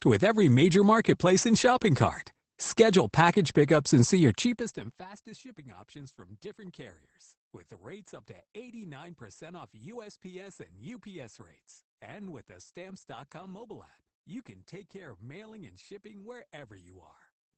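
Opus voice compression runs throughout the speech. Nothing above 8.6 kHz survives, and coarse excitation leaves it muffled and hoarse, pointing to a low bitrate near 12 kbps.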